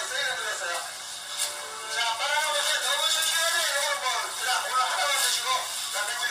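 A recording of everyday sounds carries a DECT cordless phone buzz throughout: a thin, rasping 100 Hz tone rich in harmonics, roughly 30 dB below the sound, unlike smoother 50 or 60 Hz mains hum. The whole clip is also heavily rough and grainy, with noise filling gaps between tonal components and a synthetic-sounding top band, likely low-delay AAC compression at a bitrate around 24 kbps, distinct from telephone codecs that simply cut the highs.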